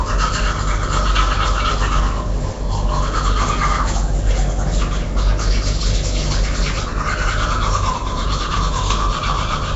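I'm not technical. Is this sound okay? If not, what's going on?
No, not quite. All the way through, the sound has a rough, fizzy edge and a smeared, underwater feel, and everything above 7.7 kHz is simply gone, so it sounds dull at the top. That's most likely Nellymoser compression, the old Flash-era microphone codec. It squeezes audio so hard that the weaker frequency bands get swapped for filler noise, which produces that hiss and blur. The damage is easy to hear.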